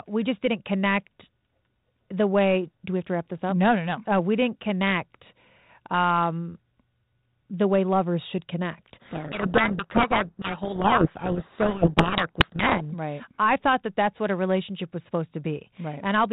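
From 8.94 to 12.82 s, after "the way lovers should" and until "right I thought that", a codec payload misread buries the speech in harsh distortion: the G.726 code words, at a rate that fits 32 kbit/s, are unpacked in the wrong bit order. A spectrogram shows dense broadband grit capped near 4 kHz, and the waveform turns ragged.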